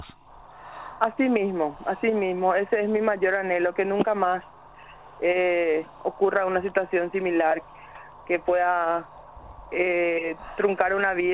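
Nothing here sounds broken; the audio just carries the narrow, telephone-like character of a call path running G.711 A-law at 64 kbps, with nothing above 4 kHz.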